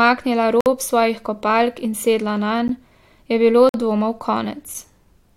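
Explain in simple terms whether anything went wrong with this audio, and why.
Yes, something went wrong. The speech drops into brief silence three times: at 0.61 to 0.66 s, just before "svojih kopalk in sedla", at 2.68 s, and at 3.69 to 3.74 s, right after "je bilo". This is a gap between stream segments. The audio arrives in one-second pieces, and their timing doesn't line up, so silence fills the space. Nothing is cut out.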